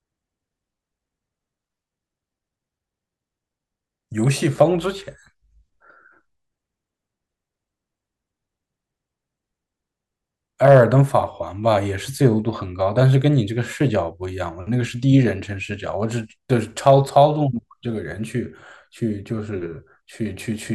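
Hard clipping hits twice, 10.65–10.83 s and 16.87–17.22 s, with the speech overdriven about 3 dB and 2 dB, so peaks flatten into brief crackly harshness.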